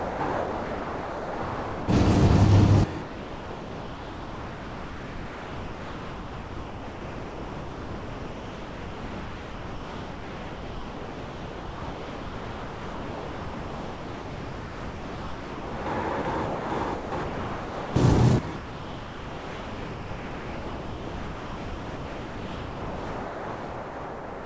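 Sound dropped by the voice detector, in eight stretches: 0.0–0.2 s, 0.32–1.88 s, 3.02–15.86 s, 16.22–16.25 s, 16.46–16.70 s, 16.94–17.12 s, 17.24–17.96 s, and 18.56 s to the end. Each time the sound gives way to steady, featureless noise; in all but the last stretch it comes back when the detector triggers again. The likely cause is the sender's voice detector treating the sound as background, halting transmission so the receiver filled in comfort noise. The longest gap runs nearly 13 s. Through the call path, nothing is heard above 8 kHz, which fits a G.722 link.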